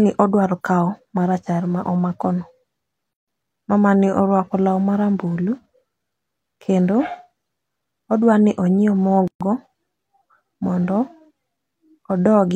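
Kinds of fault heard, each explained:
Gap at a join of encoded pieces: separately encoded chunks butted together untrimmed, so padding silence cuts the speech, roughly 140 and 130 ms, six seconds apart.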